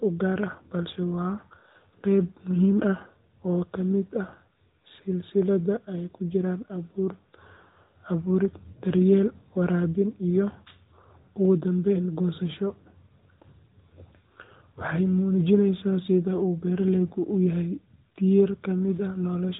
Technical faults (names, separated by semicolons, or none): AMR narrowband mobile codec